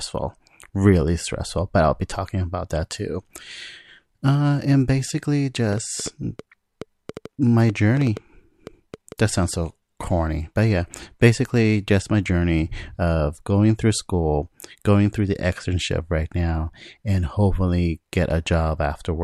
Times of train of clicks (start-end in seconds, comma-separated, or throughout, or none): 5.73-9.13